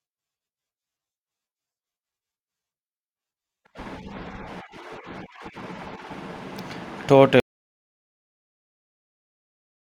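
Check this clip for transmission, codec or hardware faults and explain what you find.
One fault is present, an audio dropout to silence. At 7.4 s the speech cuts off mid-flow. The remaining 2.5 s, running to the end of the clip, is silent. No room tone or noise floor survives underneath. The input was likely lost, through a disconnect, a failed link or an accidental mute, while recording carried on writing silence. Whatever was said after 7.4 s is gone.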